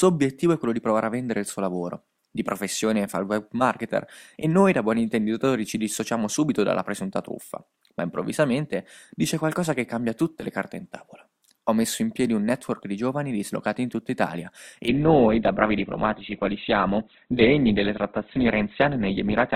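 A speech recording whose treble suddenly thins out at 14.88 s and stays dull to the end at 19.55 s, with nothing above 4.5 kHz, and no gap. That is an adaptive stream switching to a lower bitrate, consistent with Opus dropping from about 64 to 12 kbit/s.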